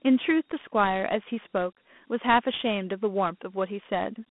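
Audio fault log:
throughout: Dialogic VOX ADPCM. Speech is band-limited to 200 Hz to 3.5 kHz, nothing above 3.8 kHz, and coarse 4-bit step coding leaves a gritty hiss trailing it.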